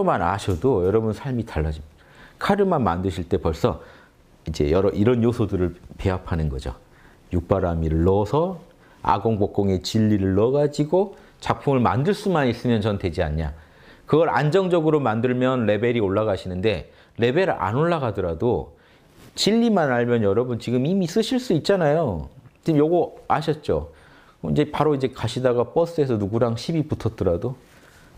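Nothing goes wrong anywhere in this one; you can just sit back and listen without a single technical hiccup to point out.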